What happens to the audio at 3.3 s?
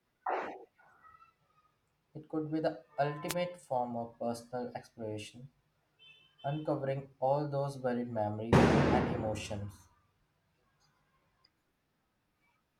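At 3.28 s the speech is hit by a wireless microphone noise hit lasting until about 3.34 s. That is roughly 60 ms. It sounds like a brief swish or burst of static over the voice. The cause is a fade in the radio link of an analogue FM microphone. Reflected signals cancel the direct one for a moment. As the signal drops, receiver noise rises.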